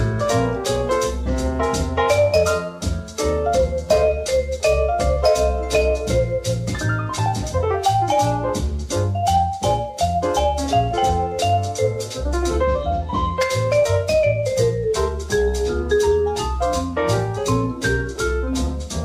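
Listening through the recording, nothing stood out as a technical problem at any point.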